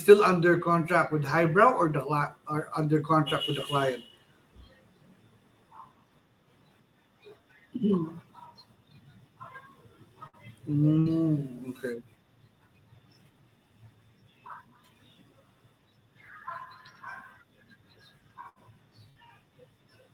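Bursts of packet loss hit at 10.27–10.36, 10.99–11.08, 18.49–18.59 and 19.10–19.18 s. Each time, about 60 ms of speech is lost and the last sound is stretched and faded into a brief buzz or hiss. On a spectrogram this shows as frozen, dimming bands ending in an abrupt jump.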